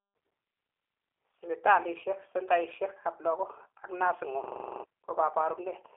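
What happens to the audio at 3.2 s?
At 3.2 s the speech carries the G.729 codec damage that runs through the whole clip. The sound is rebuilt from a vocal tract filter, a pitch predictor and a few pulses per 10 ms frame rather than the original waveform. That leaves a plainly rough, slightly synthetic texture, which fits an 8 kbit/s G.729A-type coder. The band is confined to about 300 Hz to 3.4 kHz, so nothing above 3.4 kHz remains.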